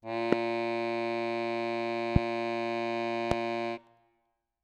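Loud pops hit the music at 0.33–0.35, 2.16–2.18 and 3.31–3.34 s, each a single sharp thump roughly twenty decibels above the music, likely from a voltage spike. Unlike a dropout, the music continues unbroken beneath each pop.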